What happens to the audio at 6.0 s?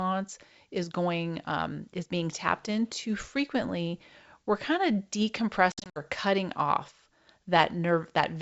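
Just before "cutting off", the speech is chopped by a burst of abrupt, hard-edged silences between 5.72 and 6.00 s: about 160 ms goes missing, scattered over roughly 240 ms, with the longest gap lasting 60 ms. Each time the sound comes back it is slightly distorted, then settles within tens of milliseconds. This is packet loss on an ADPCM call, here affecting the G.722 stream. Around seven packets were dropped and replaced with silence. Because ADPCM codes each sample as a difference from a running prediction with an adaptive step size, the receiver's predictor and step size drift away from the sender's during the gaps and take a moment to catch up.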